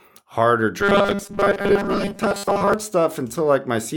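From 0.8 s to 2.74 s the speech takes on robotic sound from repeated short buffers. The voice becomes a rigid, metallic buzz locked at 200 Hz, which fits a 5 ms slice being looped. The likely cause is audio arriving too seldom, so the software replays the last few milliseconds for most of the stretch while the real audio is dropped. Unlike codec warble, the buzz stays at a fixed rate.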